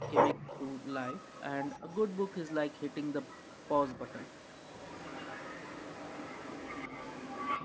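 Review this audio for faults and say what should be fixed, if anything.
A delayed second copy of the speech trails the talker through most of the clip: 0.0 to 0.86 s, 1.16 to 1.43 s, 1.68 to 2.52 s, 2.71 to 3.68 s and 3.86 to 7.64 s. It lags the original by 134 ms. It is loudest at the start, about 10 dB below the speech, and sits around 15 to 20 dB down later. This is likely echo leak: a loudspeaker's output reached the far-end microphone, the echo canceller failed to remove it fully, and the residue was sent back. Better canceller tuning or a headset at the loudspeaker end would prevent it.

The speech briefly drops out or dips at 0.33 to 0.48 s, a deep cut of roughly 40 dB, and again at 1.79 to 1.89 s, a shallower dip of around 15 dB. Each lasts well under a fifth of a second. This is likely speech suppressed in double talk: both sides were talking at once, and the echo canceller could not tell the live talker from the returning echo, so it turned both down. 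A canceller with stronger double-talk detection would prevent these dips.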